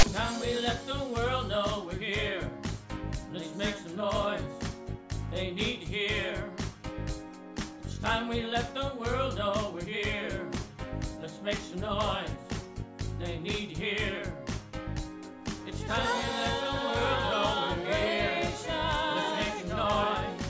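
File tags played as audio, 0 to 0.03 s: a block of text tags is read as samples, producing a brief, loud, one-sided rasp with hard edges.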